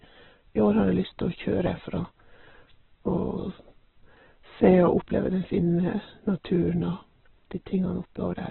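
A speech recording runs through heavy codec damage from start to finish, most likely Opus compression at a very low bitrate, around 8 kbps. The sound is narrowband and muffled, with nothing above 4.2 kHz, and its tonal parts turn rough, grainy and noisy as the encoder fills starved bands with noise or folded copies of lower bands. On a spectrogram, energy stops at a hard ceiling near 4.2 kHz, and the bands below look smeared and speckled instead of showing clean harmonic lines.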